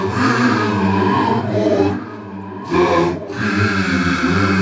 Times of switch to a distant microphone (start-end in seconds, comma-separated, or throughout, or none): none